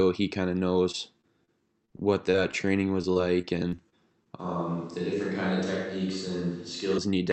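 Speech, carried over an Opus call path whose audio stops at about 8 kHz, with three kinds of fault. Brief smears and wobbles land at 0.91–0.95 s, just after "he kind of", then at 1.21–1.25 s and 1.45–1.62 s. Each is short concealed packet loss: about 20 ms of audio never arrived, and the decoder extended the preceding sound to bridge the hole before rejoining the real signal. From 1.85 to 2.66 s and again from 3.02 to 4.27 s the sound turns choppy, with fragments missing. This is repeated packet loss, producing robotic sound: hole after hole, each up to 24 ms and 30 ms long respectively, was patched in quick succession, so roughly a seventh and a ninth of those stretches is synthesized fill. At 4.40 s the sound abruptly becomes roomy and hollow, with thinner bass and a noise floor about 35 dB under the speech, at roughly the same level, and it snaps back at 6.98 s. This is likely a switch to a distant microphone, standing in for the close one.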